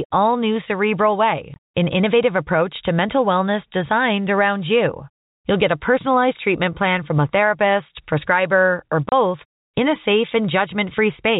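Telephone-band speech, capped at 4 kHz by G.711 coding, has two packet loss gaps filled with silence: 20 ms at 1.54 s and 30 ms at 9.09 s. The lengths fit whole 10 ms packets. The edges are hard, unlike concealment's smoothed repeats.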